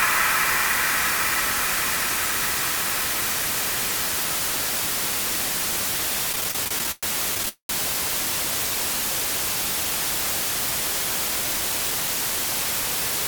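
Repeated stalls (stutter) from 6.32 to 7.49 s: packets arrived late, so the buffer ran dry 16 times, the longest wait 112 ms, each filled by stretching the last sound.

A call audio freeze follows from 7.49 to 7.71 s, likely from packets held up in transit. The sound buzzes on, fades, then falls silent for about 110 ms before resuming.

Jitter buffer speed-up from 10.83 to 13.27 s: to shed excess delay, short pitch-period pieces totalling roughly 70 ms were cut, running the audio at 103% speed with unchanged pitch.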